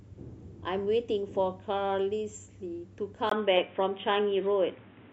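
At 3.29 s, after a 20 ms gap, the speech turns dull and boxy, with nothing above 3.8 kHz, the level shifted about 5 dB, and faint new background noise: likely an input switched to a poorer device.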